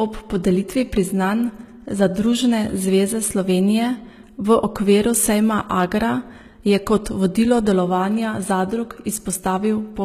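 HE-AAC compression, throughout: the treble stops sharply at 14.9 kHz, and the upper band sounds synthetic, with s sounds gritty and lispy. The likely cause is spectral band replication rebuilding the highs from copied lower bands, at a bitrate near 20 kbps.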